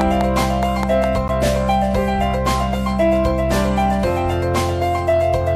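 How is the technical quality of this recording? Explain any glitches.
The recording has two clear technical faults, both in the first second and a half.

From 0.01 to 1.05 s there is a train of clicks: a regular run of about seven sharp, identical pulses at roughly 4.9 per second. The likely cause is electrical interference from nearby equipment or a faulty connection or power supply repeatedly injecting the same spike into the signal. The clicks peak about 10 dB above the surrounding sound, so they are heard as a steady ticking laid over the audio, and also in any pauses.

At 1.28 s there is a gap between stream segments. Two consecutive chunks of the stream carry time stamps that don't quite meet, so the player fills the 12.4 ms hole with silence. Because nothing is actually lost, the sound simply stops and resumes with hard edges, heard as a brief dropout or tiny stutter.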